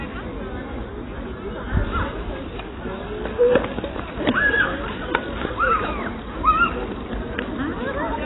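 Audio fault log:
Throughout, AAC compression: nothing remains above about 3.9 kHz, so the sound is dull and boxed-in. What is left is smeared, with a warbling, fizzy texture on sustained parts. This is likely AAC-LC encoding at a very low bitrate, around 16 kbps. With so few bits, the encoder pulls its cut-off down and quantises the remaining frequency lines coarsely, which leaves gaps and noisy patches that shift from frame to frame.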